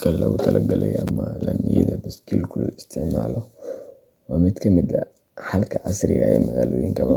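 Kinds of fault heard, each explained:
Chunks out of order: a brief jumbled moment at 1.08 s, where a 5.33 ms chunk plays one chunk late, leaving three hard joins.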